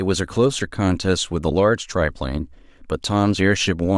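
No technical faults turn up anywhere in this speech recording, so there's nothing to flag from beginning to end.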